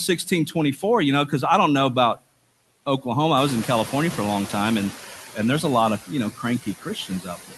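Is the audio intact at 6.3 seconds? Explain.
No. From 6.31 to 6.44 s, just after "lot of you know", the noise suppressor mistook part of the speech for background noise and attenuated it along with the noise, by about 12 dB at its deepest, over roughly a tenth of a second. That is speech cut by the noise suppressor: the sound there drops away, so soft consonants or word endings come across swallowed and faint rather than fully formed.

The same suppressor is also active at this moment, as it is across the whole clip. Working frame by frame, it pulls down every frequency band it judges to be steady noise, by about 18 dB. Those noise suppressor artifacts leave the remaining background dipping between phrases and rising again beneath them.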